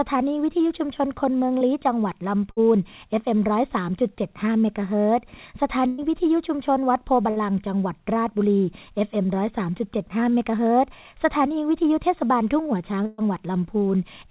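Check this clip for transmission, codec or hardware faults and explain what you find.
Yes, there are transmission faults: one short concealed packet loss and four bursts of packet loss, heard over a narrowband call path with nothing above 4 kHz, which fits G.711 A-law at 64 kbps.

The short concealed packet loss comes at 1.58 s. About 30 ms of the stream failed to reach the decoder in time, and the receiver covered the hole by extending the preceding sound before blending back into the real audio. It comes across as a brief smear or wobble rather than an audible gap. What separates it from the bursts is its length: the concealment is short and blends straight back, though a short sound can still vanish.

The bursts of packet loss occur at 2.51 s, 5.87 s, 7.30 s and 13.06 s. They remove about 60 ms, 120 ms, 60 ms and 120 ms of speech. In each case several consecutive packets were lost, so the receiver kept repeating the last sound while turning it down. 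A voiced stretch becomes a held buzz, and an unvoiced stretch becomes a fading hiss. The longer gaps at 5.87 s and 13.06 s never fall fully silent. Speech then resumes further on afterwards, with a piece missing.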